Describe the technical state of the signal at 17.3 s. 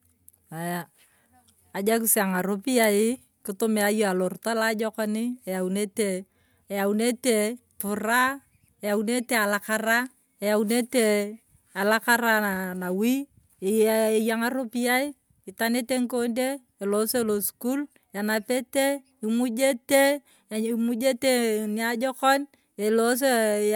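At 17.3 s the speech signal is intact, with no audible fault at that moment.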